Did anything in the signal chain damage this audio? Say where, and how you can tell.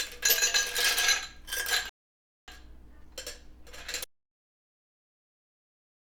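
Yes. At 1.89 s the sound stops dead and the track sits in silence until 2.48 s, then picks up exactly where it broke off, with nothing skipped. That is a rebuffering stall at the playback stage: the player exhausted its downloaded buffer and waited for more data to arrive over the network. No material is lost, but roughly 0.58 s of dead air is inserted into the timeline.

From 4.04 s the sound cuts out abruptly and never returns, running as silence to the end of the clip with no room tone or noise floor underneath. This is an audio dropout to silence. The likely cause is a lost input upstream, such as a disconnected device, a failed link or an accidental mute, while the recorder or encoder kept writing silence. Whatever happened after that point was never captured.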